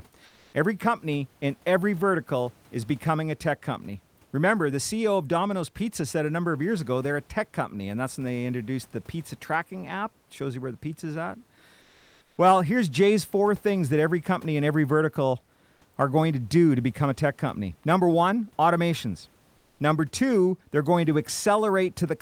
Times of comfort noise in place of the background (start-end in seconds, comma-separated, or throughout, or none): 0.25-0.53, 11.81-12.37, 19.57-19.79